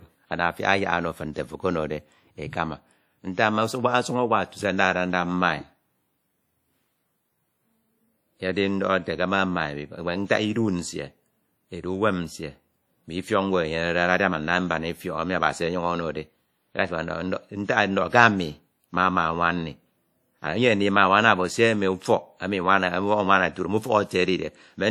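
From start to end, the speech carries plainly audible WMA compression damage, likely from a low-bitrate encode. Long transform blocks smear quantisation noise around each syllable. Weak detail drops out. The result rings and sounds washy, with hiss rising and falling alongside the speech, which fits about 48 kbps.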